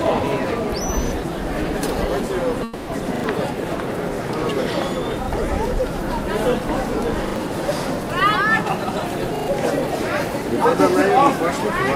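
It's a recording of everyday sounds with three kinds of playback trouble. The most frequent is a repeated buffer, heard five times: at 1.08, 3.16, 5.24, 7.28 and 9.36 s. Each time a short slice sounds again with a hard join, giving a quick stutter. The repeated piece is about 40 ms long, which points to a 40 ms output buffer that the device replayed when fresh audio didn't show up. It plays once more at 1.08 and 5.24 s, twice more at 3.16 and 7.28 s, and three times more at 9.36 s. Each stutter eats around 40 to 100 ms of the real sound that should have played there. At 2.63 to 2.90 s there's a call audio freeze: the last bit of sound gets stretched into a fading buzz for about 240 ms instead of cutting to silence. The audio then picks up exactly where it left off, so nothing is lost, but everything after it arrives 240 ms later. The likely cause is packets held up in transit until the jitter buffer ran dry. 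From 8.61 to 9.04 s there's a jitter buffer speed-up. The sound runs about 23% fast with its pitch unchanged, so that stretch feels hurried. The receiver is trimming tiny pitch-period-sized pieces one after another to win back delay, taking out roughly a tenth of a second in total.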